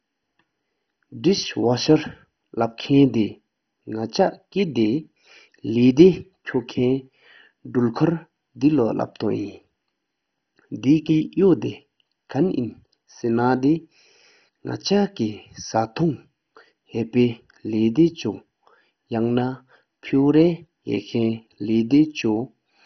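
MP2 compression runs throughout this speech clip: the whole recording is dull, with nothing above about 6.1 kHz, and a gurgling, granular roughness runs through it. This is likely the work of an MPEG Layer II encoder starved of bits, which fits a rate near 32 kbps. The coder divides the spectrum into 32 sub-bands and, lacking bits, shuts off the upper ones entirely. Bands flicker on and off, and those that remain are coarsely quantised.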